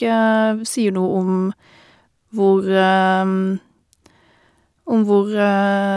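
Listening through the speech, nothing stood out as a technical problem at any point.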